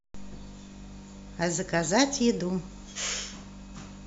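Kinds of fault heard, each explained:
Nothing here stands out as a fault, so there's no kind of problem to list for this bit of speech.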